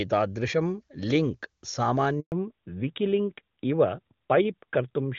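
At 2.20 s the speech fades out within a few tens of milliseconds and stays silent until 2.32 s, a 120 ms handover gap as the call switches networks. No audio arrives during the switch, so this is true dead air, not the buzzy repeated or smeared fill of packet-loss concealment.

From 2.32 s to the end, a fallback to narrowband removes everything above 4 kHz, and the speech turns duller and rougher. Before the gap it has the clear, extended top of HD Voice, which fits AMR-WB at its highest rate. After the gap it sounds like an older narrowband codec such as AMR-NB at 12.2 kbit/s. A filter would only darken the tone, but here the texture also changes, and the change begins exactly at the end of the gap.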